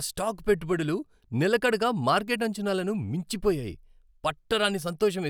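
No technical faults can be heard anywhere in the recording.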